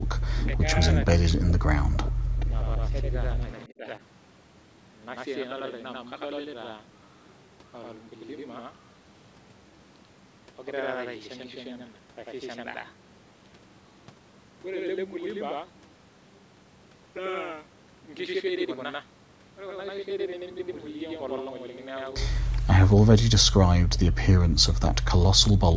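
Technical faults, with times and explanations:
Throughout, channel delay (doubling): one channel runs about 93 ms late, which fits a 4096-sample buffer, and summing to mono leaves a same-level slap doubling every sound.
0.03–0.09 s, 0.57–3.11 s, 3.68–3.85 s and 22.65 s to the end, speech suppressed in double talk: the speech dips by around 20 to 40 dB or cuts out in pieces, likely because an echo canceller turned down its own talker along with the loudspeaker echo.
0.38–0.53 s, 2.38–2.46 s, 3.58–3.69 s and 22.56–22.62 s, echo leak: a copy of the speech returns 425 ms late, about 15 to 30 dB down, likely as loudspeaker pickup escaped cancellation.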